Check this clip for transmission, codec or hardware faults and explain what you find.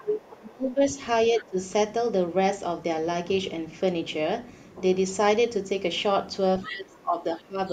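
Two echo-cancellation problems are audible in this speech clip: the talker is ducked in three places, and the far-end voice bleeds through twice.

Speech suppressed in double talk, 0.0 to 1.0 s, 1.38 to 1.57 s and 6.68 to 7.59 s: the talker's level sinks by about 25 dB, about 15 dB and about 20 dB respectively. This is likely an echo canceller that, facing both parties at once, could not tell near speech from loudspeaker echo and attenuated everything, so the voice dips and thins.

Other side's voice leaking through, 6.63 to 6.75 s and 7.67 to 7.72 s: brief scraps of a second voice sit about 15 dB, then about 30 dB, below the talker. The canceller likely failed to subtract all of the far end's loudspeaker playback from the microphone, leaving faint fragments of the other party audible.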